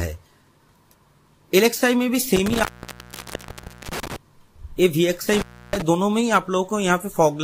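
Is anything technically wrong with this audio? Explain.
Yes: intermittent contact, twice. A loose plug or cable briefly breaks the signal path, from 2.36 to 4.16 s (open about 1.25 s) and from 5.33 to 5.82 s (open about 0.31 s). The sound drops to faint hiss, with crackle as contact breaks and returns.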